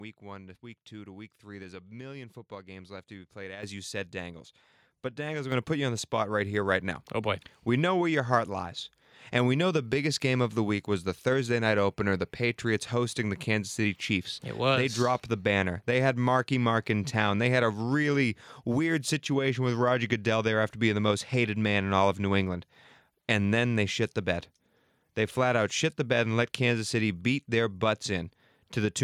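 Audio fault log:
3.63 s and 5.52 s: microphone volume stepped up. The level jumps about 9 dB between "left to be played" and "you said", then about 5 dB more before "going to put you", as the call software raised the microphone's input volume. Voice and background noise rise together in one instant step and stay there. This is unlike a speaker talking louder, which changes only the voice, and unlike automatic gain control, which ramps gradually.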